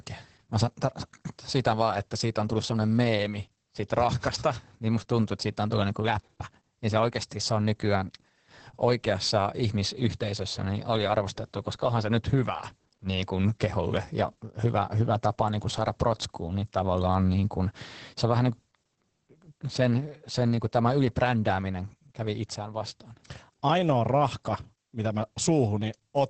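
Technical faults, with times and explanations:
Throughout, Opus voice compression. The speech has nothing above 8.5 kHz, so it sounds muffled. The excitation is coded coarsely, leaving it hoarse and slightly robotic. This points to the SILK speech coder in wideband mode, near 10 kbps.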